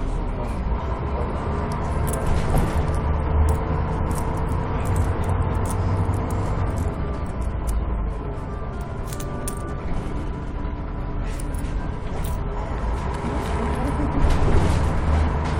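A recording of sounds with compressed frames skipped at 0.76 s and 11.39 s: about three 23.2 ms frames vanish each time, so roughly 70 ms jumps ahead, seen as a narrow vertical seam on the spectrogram.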